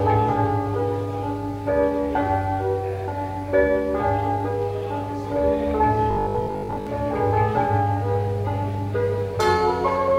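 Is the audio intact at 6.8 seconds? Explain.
No. At 6.8 seconds the audio is inside a stretch of robotic sound from repeated short buffers that runs from 6.11 to 6.87 s. The likely cause is that new audio stops arriving in time, so the playback repeats the last short block instead of advancing, and roughly 70 percent of the span is filled this way. The repetition imposes a fixed 50 Hz buzz, which fits a block of about 20 ms, giving the sound a rigid, metallic character.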